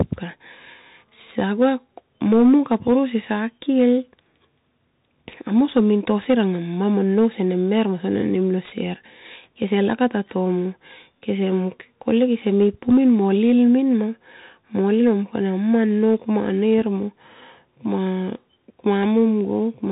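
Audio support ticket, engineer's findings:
Bluetooth CVSD headset codec, whole clip. Speech band-limited hard, nothing above 3.8 kHz, so it's boxy and phone-like. Sibilants come out scratchy, with a granular hiss riding under the speech. Loud bright bits smear because the one-bit up/down stepping can't keep pace and the adaptive step lags. Damage is plainly audible, consistent with a 64 kbps CVSD headset link. Probable component: headset in hands-free profile rather than a wideband mode.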